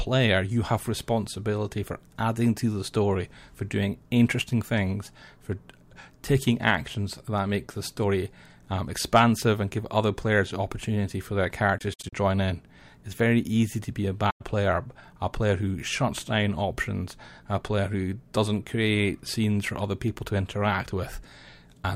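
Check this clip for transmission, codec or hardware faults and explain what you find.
AAC frame loss with muting occurs twice in this speech. Lost AAC frames have their spectrum zeroed by the decoder, and the overlapping transform windows taper the sound down and back up across each gap. From 11.79 to 12.13 s, short dropouts scattered over about 340 ms remove roughly 150 ms of audio, the longest lasting about 70 ms. At 14.30 to 14.41 s about 110 ms of audio drops out. Both are soft-edged silences.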